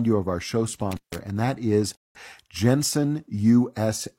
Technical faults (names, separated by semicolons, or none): intermittent contact; rebuffering stall